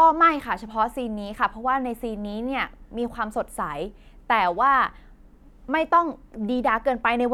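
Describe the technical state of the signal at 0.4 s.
The signal at 0.4 s is intact, with no audible fault at that moment.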